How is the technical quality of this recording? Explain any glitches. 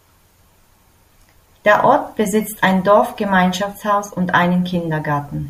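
There's one glitch running through nearly the whole recording. From 0.17 to 5.38 s you hear clock slip clicks: faint ticks about every fifth of a second, likely from unsynced clocks roughly 100 ppm apart, each slip one sample.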